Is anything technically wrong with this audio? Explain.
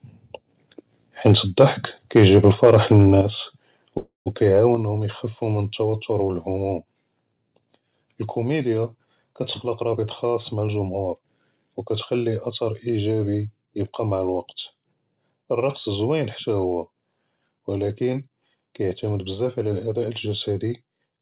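Yes. The speech has four kinds of fault.

Between 1.26 and 1.65 s, and again from 2.16 to 3.08 s, the loudest syllables carry a harsh, crackling edge, the sound of microphone overload. The peaks push about 3 dB and 4 dB past the converter's limit, so their tops are flattened, with a few percent of samples clipped in each stretch. The likely cause is input gain set too high for the converter.

At 3.21 s and again at 4.75 s the whole signal, voice and background together, drops abruptly by 6 dB and then 5 dB. They sound like a microphone volume stepped down by the call software in reaction to the overload, most likely an automatic gain control cutting the device's input level in single steps rather than a gradual fade.

From 3.98 to 4.28 s the sound stalls in a call audio freeze. The last fragment is stretched into a fading buzz or hiss that ends in about 130 ms of silence, and then the speech resumes exactly where it stopped. 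Nothing is lost, but a 278 ms gap has been inserted, so everything afterwards runs that much later. This points to delayed packets and a jitter buffer that ran empty.

From 8.97 to 10.90 s the speech sounds hurried, running at about 114% of normal speed with the pitch unchanged. This is jitter buffer speed-up. After a backlog builds, the receiver trims many short pitch-period slices, around 300 ms in total, to bring latency back down. The effect is compressed timing and rushed syllables.

The call path itself uses G.711 mu-law at 64 kbps, with nothing above 4 kHz.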